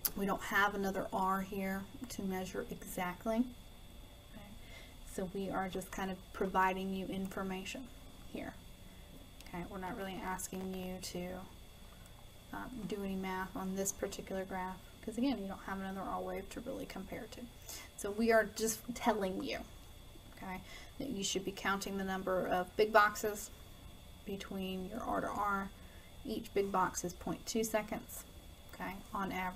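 Processor overload crackle, 9.87 to 10.86 s: dozens of tiny buffers, each under a millisecond, miss their deadline and drop to silence, producing gritty, tearing crackle.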